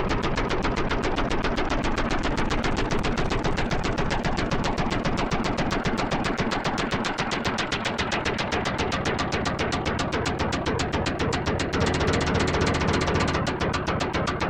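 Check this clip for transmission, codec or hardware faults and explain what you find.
One fault is present, a doubled audio track from 11.77 to 13.37 s. The sound gains a hard, full-band repeat trailing roughly a third of a second behind, at about equal loudness, dry and switching on and off abruptly. The likely cause is a second capture path or edit mixing in a delayed copy.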